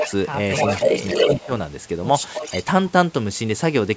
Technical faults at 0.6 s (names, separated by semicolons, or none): echo leak